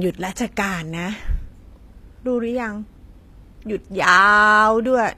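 From start to finish the speech carries plainly audible codec damage, most likely HE-AAC compression at a low bitrate, with the artefacts consistent with a stream of around 24 kbps. The codec encodes only the lower band properly and synthesises the treble by copying lower spectral content upward under a coarse envelope. The top end therefore sounds bright but artificial, with upper harmonics misaligned against the lower ones, so sibilants come across gritty, metallic or lisped.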